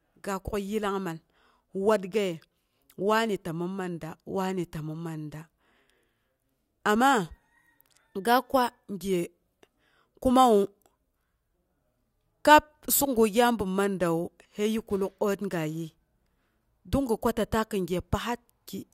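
Nothing here needs fixing: it's a recording of speech, and no technical problems turn up anywhere in it.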